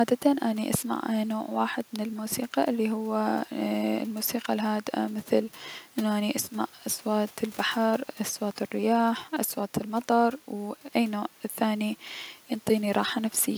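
No technical faults can be heard anywhere in the speech, with no interruptions, level problems or distortion at any point.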